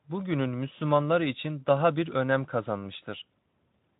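A speech recording with no technical faults to report.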